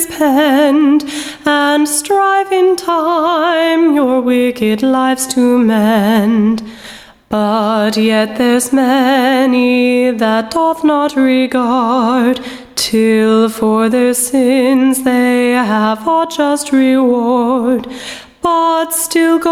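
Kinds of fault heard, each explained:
Gain pumping: The input gain was likely set far too high for the microphone, leaving a fast limiter or compressor to drag the level down every time a loud sound arrives. Throughout the clip the gain swings by something like 15 dB. Loud and quiet passages sit unnaturally close in level, so the whole sound comes across squashed and breathing.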